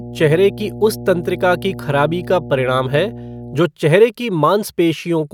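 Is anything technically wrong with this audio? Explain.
Yes. From the start to 3.59 s, just before "चेहरे की", there is mains hum: a ground loop or nearby transformer leaks the 60 Hz power line into the signal, giving a steady low tone with some low harmonics, roughly 15 dB below the speech. Its fixed pitch sets it apart from broadband, shifting rumble.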